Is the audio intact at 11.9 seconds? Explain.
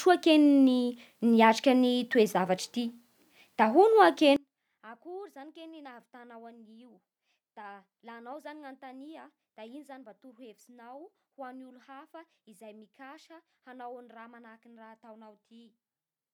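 No. From 4.36 s to the end, one channel is likely inverted. In mono, the shared speech cancels, falling about 26 dB to a faint trace.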